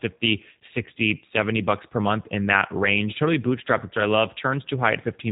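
The speech has been squeezed through a low-rate model-based voice codec, consistent with G.729 codec coding at around 8 kbit/s, rebuilding each frame from a vocal tract filter and sparse pulses. Throughout, nothing above 3.8 kHz survives, and the speech sounds plainly rough and synthetic.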